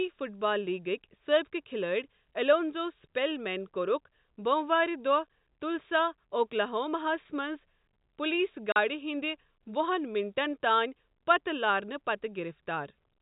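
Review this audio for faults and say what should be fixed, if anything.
Packet loss filled with silence cuts the speech at 8.72 s, just after "ہس منٛز پُلیٖس". The gap lasts 40 ms, which fits two lost 20 ms packets. The receiver played pure silence in their place, leaving hard edges. The narrowband G.711 telephone sound continues steadily around the gap.

To prevent it, enable packet loss concealment at the receiver and add forward error correction or a deeper jitter buffer.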